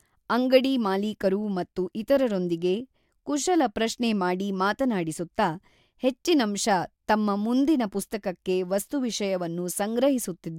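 Unsynchronised clocks likely drift about 150 ppm apart, slipping a sample every 0.15 s or so. The result is clock slip clicks, faint steady ticks from 0.16 to 10.46 s.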